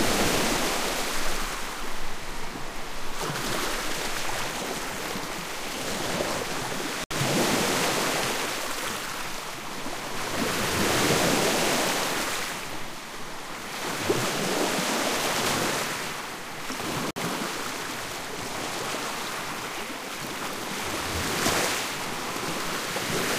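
Short silences cut into an otherwise continuous recording of sounds, at 7.04 s (about 68 ms) and 17.11 s (about 54 ms), ten seconds apart. Each is a gap at a join of encoded pieces: 10-second segments encoded separately, their start delay and end padding left in, before the sound resumes where it stopped.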